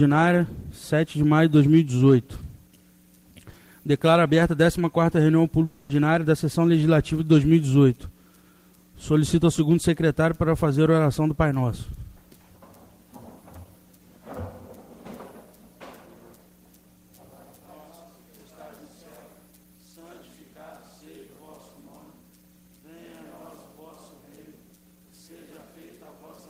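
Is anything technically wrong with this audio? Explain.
Yes, there are two faults. The first is a short concealed packet loss from 3.51 to 3.55 s. About 20 ms of audio arrived too late to decode, and the receiver patched the gap by extending the preceding sound before blending back. The result is a brief smear or wobble.

The second fault runs from 5.65 to 5.91 s. For about 240 ms the sound is carried on artificially as a fading buzz or hiss, then resumes further along with that stretch missing. This is likely a long network dropout. There is no silence before the audio returns, so it presents as a longer, thinning smear that skips ahead, not a momentary wobble.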